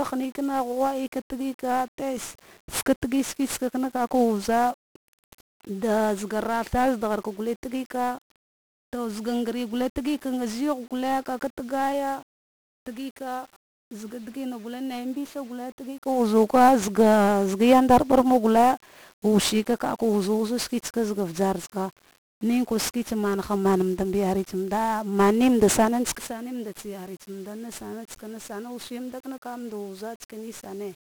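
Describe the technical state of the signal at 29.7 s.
At 29.7 s the speech carries 1-bit DFPWM compression, present throughout the clip. Each sample is a single up-or-down step of an adaptive charge, so heavy broadband quantisation noise makes it fuzzy and crackly, treble buried in hiss. A spectrogram shows a dense noise floor smearing upper bands, and the waveform looks jagged, which fits a stream of about 48 kbps.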